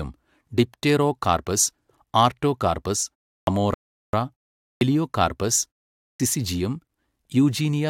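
In this speech clip, three phrase onsets lose their opening sounds and jump straight out of silence. At 3.39 s, after "ഡിപ്റ്റെറോകാർപസ് ആർട്ടോകാർപസ്" and a pause of about 0.32 s, the first 82 ms are missing. At 4.73 s, the start of "എലിയോകാർപസ് സിസിജിയം" loses 81 ms after a 0.45 s gap. At 6.11 s, 87 ms vanish after a 0.47 s pause. This is a clipped start after a pause: the output device drops into a low-power state during each gap and takes roughly 80 to 90 ms to wake and lock again, so the opening of the next phrase is swallowed. Separately, at 3.74 s, just after "ഡിപ്റ്റെറോകാർപസ് ആർട്ടോകാർപസ് അമോറ", the sound cuts to silence for 0.39 s and then carries on exactly where it stopped, with nothing missing but extra time inserted. That is a rebuffering stall, where the player ran out of downloaded audio and had to wait for more to arrive before continuing.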